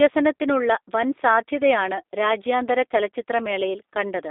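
Throughout, the speech carries plainly audible G.729 codec damage, sounding slightly rough and synthetic, with a coarseness that fits an 8 kbit/s rebuild from filter, pitch and pulse parameters. A spectrogram shows energy confined between 300 Hz and 3.7 kHz, with blurred harmonic detail.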